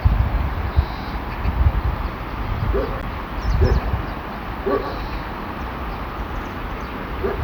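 At 3.01 s the sound cuts out with a tiny tick, a dropout of about 15 ms, and resumes from a different point. This is a CD skip: a knock or disc flaw threw the laser onto another turn of the spiral, so playback muted briefly and continued elsewhere.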